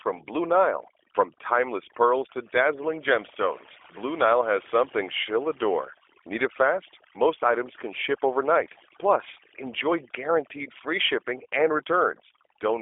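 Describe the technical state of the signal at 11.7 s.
At 11.7 s the background has dropped and broken up into twinkling, warbling specks. This is overdone noise removal, present across the whole clip. A noise reduction stage set too aggressively pulls individual frequency bands far down or off whenever they sit close to its noise estimate. The quieter parts of the voice fall below that threshold and vanish along with the hiss, leaving isolated specks where stray bands poke through.

The same moment also has a narrow, telephone-like quality, slightly rough and synthetic, with nothing above about 3.6 kHz and little below 300 Hz. That fits the G.729 codec, specifically its G.729A form at a rate that sounds like 8 kbit/s, and its damage is plainly audible throughout. Rather than storing the waveform, it rebuilds each 10 ms frame from a vocal tract filter, a pitch predictor and a handful of pulses, which gives the voice its grainy, artificial edge.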